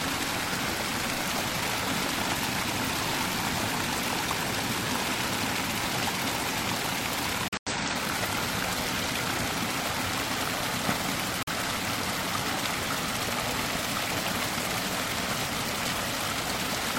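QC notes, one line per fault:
7.48–7.73 s and 11.43–11.53 s, corrupt frame muted: the sound cuts abruptly to silence for about 0.25 s, which fits several lost frames, then for about 0.1 s, which fits a single frame. Damaged compressed frames were rejected by the decoder and replaced with silence, so the timing is preserved.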